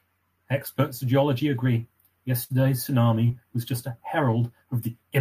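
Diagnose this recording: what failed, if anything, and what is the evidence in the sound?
The network stage failed with a burst of packet loss from 2.43 to 2.51 s. The receiver stretched the last sound into about 60 ms of decaying buzz or hiss, then resumed with about 60 ms of speech gone. That fading fill, rather than hard silence, rules out a simple dropout.

A short concealed packet loss, also on the network side, appears at 3.27 to 3.31 s. About 20 ms went missing and was covered by a brief synthesized continuation blended back into the real audio. It is heard as a quick smear or wobble, far briefer than the fill at 2.43 s.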